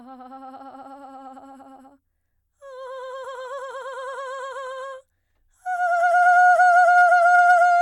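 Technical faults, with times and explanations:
6.61–7.52 s, hard clipping: the music overdrives a stage by about 1 dB, flattening peaks and adding upper harmonics heard as light crackle.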